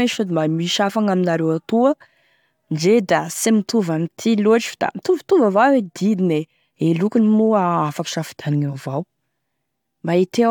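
No technical faults can be heard anywhere in the recording; the signal stays continuous and stable throughout.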